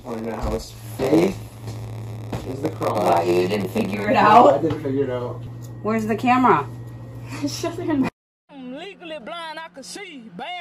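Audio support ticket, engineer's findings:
0.00 to 4.05 s: steady buzz at 93.8 Hz over the sound, which plays slightly slow (0.938x) at roughly normal pitch. Block size mismatch (padded) between two buffer stages. Upstream writes short blocks, downstream reads blocks that fit 512 samples, and the remainder is zero-filled. This leaves a brief gap every block, causing the buzz at the block rate and the stretch by the size ratio.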